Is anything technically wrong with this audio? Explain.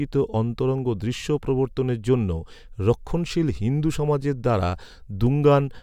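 Yes. There are compressed frames skipped at 0.33 s, just before "অন্তরঙ্গ দৃশ্য প্রবর্তনের জন্য". About one frame of the coded speech never reaches the output, either because it is missing from the stream or because the decoder rejected it as corrupt. The frames here are 23.2 ms long, so the speech jumps forward by roughly 20 ms.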